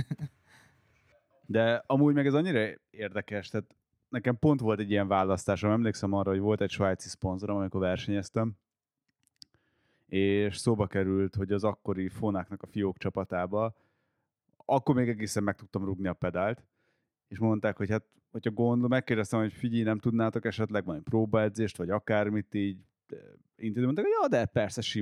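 A speech clip with two drift correction steps. From 8.24 to 9.94 s, after "egy svájci szponzorom amikor", the audio slows by 5.87% and drops about a semitone (-105 cents). It snaps back before "és szóba került hogy". From 23.91 to 24.85 s it speeds up by 5.87% and rises about 99 cents. Speed and pitch move together. The likely cause is clock-matching software changing the playback rate in one step to balance its buffer.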